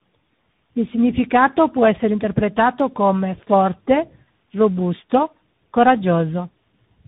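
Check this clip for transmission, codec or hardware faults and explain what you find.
One fault runs through the whole clip: tandem speech coding. The speech passes through two speech coders in a row. The warble points to a low-rate coder near 8 kbit/s, and the granular, slope-limited edge fits CVSD. Each stage codes the previous stage's errors again, so the speech is rough, muffled and warbly, with nothing above 3.8 kHz.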